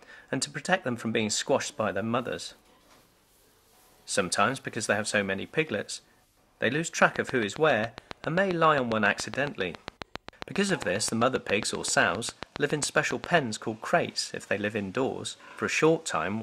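From 7.02 s to 13.38 s a train of clicks runs through the audio: some fifty sharp, near-identical pulses at a steady 7.4 per second, standing roughly 15 dB above the surrounding sound and audible in quiet gaps as well. The cause is likely interference from nearby equipment or a faulty connection or power supply. Unlike random crackle or isolated dropout pops, these clicks share one shape and keep an even, metronome-like spacing, heard as a regular ticking.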